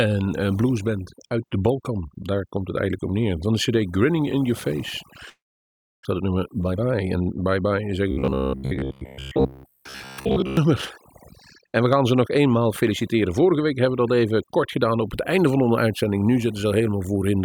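It's a speech recording, and the whole thing has overdone noise removal: the background is pushed to near silence with little twinkling specks left in it, and quieter parts of the voice get switched off along with the noise bands. At 5.29 s there's what's most likely a long network dropout lasting until 6.07 s. The last bit of sound is stretched into a fading buzz or hiss, then it goes quiet, and about 400 ms of the real audio never comes back at all. Right after, from 6.17 to 7.71 s, there's a jitter buffer speed-up. The receiver is trimming tiny pitch-period slices to claw back roughly 300 ms of built-up delay, so the speech runs at about 121% speed with unchanged pitch and sounds rushed. Then from 8.11 to 10.57 s you get robotic sound from repeated short buffers. There's a rigid metallic buzz at 66.7 Hz, which fits a short chunk of about 15 ms being looped while fresh audio arrives too rarely. 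Most of that stretch is repeats rather than real signal, so it only loosely tracks the speech underneath.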